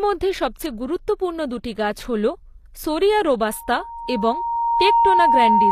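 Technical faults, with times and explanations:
Throughout, HE-AAC compression, likely: the codec kept only the lower spectrum and rebuilt the treble by copying lower bands upward. S sounds come out gritty and metallic, nothing sounds above 14.9 kHz, and the damage is plainly audible, fitting a bitrate near 24 kbps.
3.44 to 5.71 s, loudspeaker feedback squeal: a microphone began picking up its own loudspeaker, and at 930 Hz the loop gain passed one. That single tone swells over about a second and a half and is still sounding at the clip's end, sitting about 5 dB above the speech.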